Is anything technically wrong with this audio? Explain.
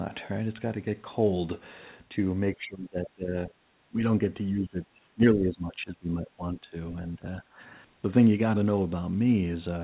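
Yes. Speech is suppressed in double talk, likely because the echo canceller couldn't tell the near talker from loudspeaker echo while both sides spoke, and so turned everything down. The speech sinks at 2.55–3.53 s, 3.89 s, 4.53–6.76 s, 7.16 s and 7.42–7.6 s, by roughly 25 dB at worst. The longest stretch is gutted for about two seconds, and the last dip is only slight. The band stops near 4 kHz, which fits a G.711 call path.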